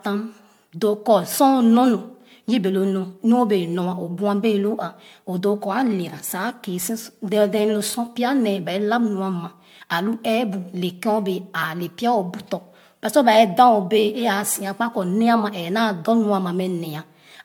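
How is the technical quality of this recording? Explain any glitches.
The recording has one fault, present throughout: generation loss. Across the whole speech clip it sounds swirly, smeared and hollow, with blurred consonant attacks and content stopping near 19.9 kHz. The likely cause is repeated MP3 re-encoding, perhaps seven passes at rates near 96 kbit/s. Each pass requantised on a shifted frame grid, so noise and spectral gaps stacked up.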